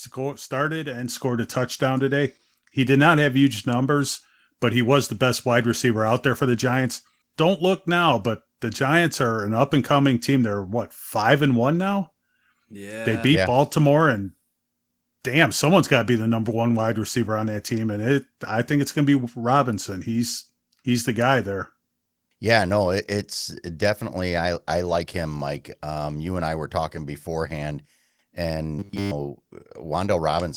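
At 1.08 s, between "started and" and "scored a touchdown today", the microphone volume is stepped up in a single jump of about 7 dB. The call software has judged the input too quiet and raised the device's input gain at once rather than gradually. Speech and background noise rise together in level at that instant, mid-phrase, and stay at the louder setting afterward, so the change is audible as an abrupt step.

From 28.79 s to 29.11 s the speech turns into robotic sound from repeated short buffers. For that third of a second the sound becomes a rigid, metallic buzz at 100 Hz that still loosely tracks the speech contour. The likely cause is audio arriving too infrequently, with the software filling the gap by looping the most recent slice. A 100 Hz buzz fits a 10 ms segment repeated over and over, covering essentially the whole stretch while the real audio is skipped.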